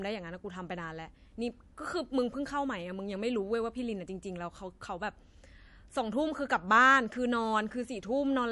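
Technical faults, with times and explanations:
Throughout, MP3 compression: the speech has a watery, swirling quality with a dull top end, as nothing is heard above about 11.3 kHz, and the damage is plainly audible rather than subtle. This likely comes from a low-bitrate MP3 encode, around 48 kbps, where the encoder runs short of bits, cuts the treble at a fixed point and drops weaker frequency lines that flicker on and off from frame to frame, smearing consonants and sibilants.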